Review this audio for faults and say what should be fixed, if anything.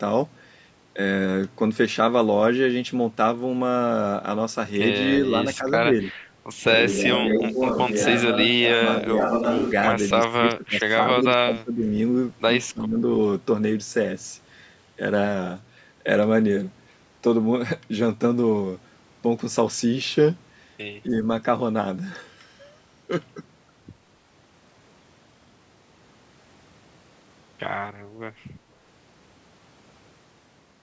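The talker's level dips repeatedly in bursts at 5.18–5.26, 5.46–5.64, 6.97–7.04, 7.30–7.60, 8.55–8.80, 9.00–9.25, 10.27–11.94 and 12.73–13.04 s. The early dips are shallow, a few dB. Later ones go much deeper, up to around 20 dB, with the longest stretch of patchy loss around 10.3–11.9 s. This is likely speech suppressed in double talk. The echo canceller, unable to tell this talker from loudspeaker echo while both sides spoke, attenuated everything. A double-talk detector tuned to preserve near-end speech, or a headset to remove loudspeaker echo, would prevent it.

From 6.77 to 9.71 s the sound abruptly turns roomy and hollow with thinner bass, then snaps back. Loudness stays roughly the same, but background room noise sits only about 25 dB below the speech. The likely cause is a switch to a distant microphone, with the close microphone's signal dropping out and a farther pickup filling in. 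Monitoring the close microphone's connection and battery, and not letting the recorder fall back to a secondary input, would prevent it.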